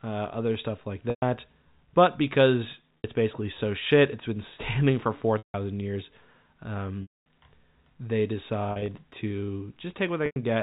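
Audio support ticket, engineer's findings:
Packet loss with pitch repetition at 1.1, 2.99, 5.38, 7.02, 8.72 and 10.26 s, gaps of 60 to 240 ms: buzzy held tone, fading out. Spectrogram shows repeated identical harmonic bands tapering to blank.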